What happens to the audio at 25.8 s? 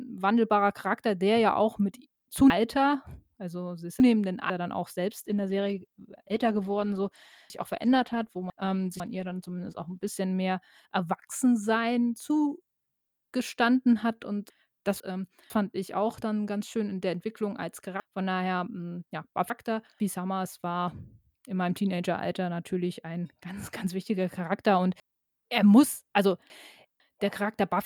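Chunks out of order, from 25.0 to 27.0 s: one 500 ms piece of the speech plays three chunks late, giving a jumbled moment.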